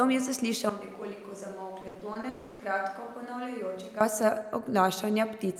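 At 0.69 s the speech suddenly turns roomy and hollow, with thinner bass, a level drop of about 10 dB, and background noise sitting only about 25 dB below the speech. This abrupt change, which lasts until 4.01 s, is most likely a switch to a distant microphone standing in for a close one that failed. On a spectrogram the low end thins and a diffuse noise floor fills the gaps between syllables. The waveform's envelope steps down at 0.69 s and back up at 4.01 s.

From 1.81 to 2.25 s, inside that roomy stretch, repeated packet loss (robotic sound) makes the speech choppy. Five short holes, the longest 80 ms, are each patched by extending the preceding sound, so about a third of this span, 160 ms in total, is synthetic filler rather than real audio. A spectrogram shows smeared, frozen harmonic bands alternating with normal speech. The waveform shows repetitive, periodic-looking chunks.

Right after, from 2.29 to 2.61 s, roughly 300 ms of sound is replaced by a buzzy or hissy continuation of the last sound that decays without ever reaching true silence. 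Speech then resumes with that portion missing. This is likely a long network dropout. On a spectrogram it appears as a horizontal, fading smear with no new onsets. The waveform shows a shrinking, repetitive tail before normal speech returns.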